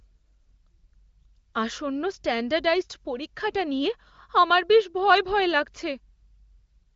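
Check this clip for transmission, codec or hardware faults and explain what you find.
No transmission, codec or hardware faults are audible: the speech runs through an AMR wideband (HD Voice) path whose band stops near 7.4 kHz, and its codec colouring is faint at most, which points to one of the upper AMR-WB rates.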